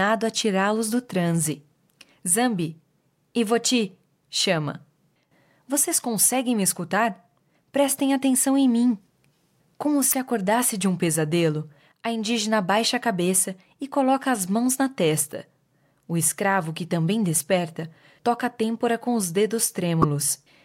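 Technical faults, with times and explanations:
10.11–10.14 s, 15.32 s and 20.02–20.04 s, damaged data in a compressed stream: short chirps or blips in the speech, just before "acordasse de um pesadelo" and just after "coloca as mãos na". Corrupted bytes made the decoder misread frames, lose sync and jump to the next header.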